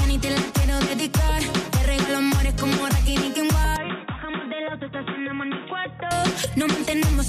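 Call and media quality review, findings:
Input switched to a poorer device, 3.76–6.11 s. Audio abruptly narrows and turns dull, nothing above 3.8 kHz, level drops about 10 dB, faint new noise floor appears. No gap at switch. Likely capture moved to a narrowband microphone or headset profile, then back.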